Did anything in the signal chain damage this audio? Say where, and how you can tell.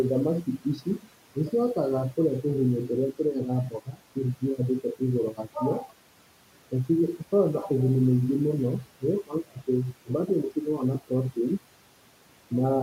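Yes. Call processing: speech cut by the noise suppressor at 0.44–1.08 s before "nĩ cihotaga kũria tũgunyũ" and 3.7–3.99 s, dipping about 13 dB, gated with room noise, unlike dropouts, which leave silence.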